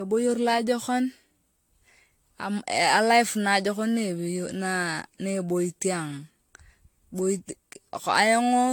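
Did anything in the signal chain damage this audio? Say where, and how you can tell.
Yes. At the codec stage, the speech sounds swirly, smeared and hollow throughout, with blurred consonant attacks, most likely from generation loss: repeated AAC-LC re-encoding at 96 kbit/s, around seven passes. A spectrogram shows a hard ceiling at 19.1 kHz and patchy spectral holes that accumulate.

At the driver or buffer stage, periodic USB or driver dropouts produce ticks every 0.5 s from 3.99 to 6.49 s. Each drop replaces a tiny fraction of a millisecond with silence. On the waveform these are brief near-silent notches; the spectrogram shows thin, evenly spaced vertical lines.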